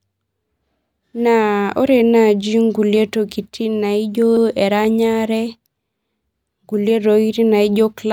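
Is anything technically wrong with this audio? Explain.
Yes. Repeated frames occur at 4.37 to 4.46 s. A 96 ms block of the compressed stream was delivered twice, so the decoder plays that stretch of speech once more before moving on. The length fits a run of about three codec frames. It is heard as a brief stutter, the same fraction of a second sounding back to back. The clip runs 96 ms longer because of it.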